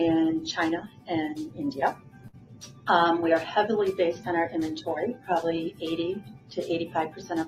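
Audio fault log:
Throughout: noise suppressor applied to music or sounds. A speech-tuned suppressor keeps treating steady tones, ambience and reverb as noise, swinging the level by around 15 dB. Onsets mostly pass while sustained parts and tails sink, so the sound pumps and thins.
0.81–1.10 s, 1.92–2.87 s, 5.14–5.29 s, 6.18–6.58 s, 6.87–7.31 s: sound cut by the noise suppressor. Held and decaying material is mistaken for noise and pulled down, by about 15, 15, 12, 15 and 11 dB respectively. Decays are cut short and the sound dips audibly.
2.27–2.35 s: burst of packet loss. About 60 ms of audio is lost and replaced by roughly 59 ms of concealment that stretches the last sound and fades it. This gives a brief held buzz or fading hiss. Playback then resumes with the gap's contents missing.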